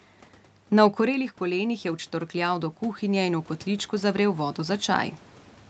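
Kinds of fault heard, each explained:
Automatic gain rising: from 0.97 to 5.15 s, the input falls about 9 dB and gain climbs slowly by about 9 dB, swelling speech and room noise together.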